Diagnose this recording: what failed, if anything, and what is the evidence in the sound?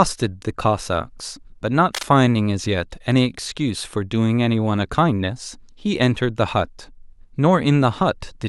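The fault sits in the analogue wiring. From 1.94 to 2.11 s, a burst of cable scratch noise rides over the speech: dense, irregular crackle and rustle lasting under a fifth of a second, roughly 10 dB below the speech level. The uneven, gritty texture points to a likely worn connector or cable being flexed, its contact resistance jumping rapidly as it moved and injecting broadband noise straight into the signal.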